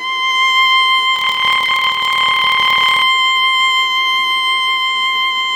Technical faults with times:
1.14-3.04 block size mismatch (padded)

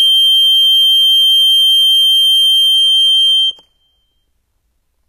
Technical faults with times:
0.00-5.08 HE-AAC compression

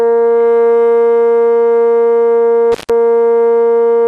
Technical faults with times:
0.00-4.08 MP2 compression
2.72-2.90 intermittent contact

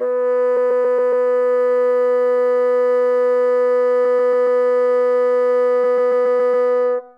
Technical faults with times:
0.56-1.26 repeated frames
4.04-4.60 repeated frames
5.83-6.67 repeated frames

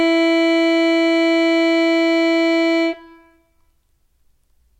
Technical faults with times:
none

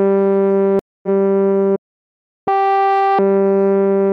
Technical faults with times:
0.79-1.09 stream reconnect
1.75-2.48 playback stall
2.48-3.19 catch-up at higher speed

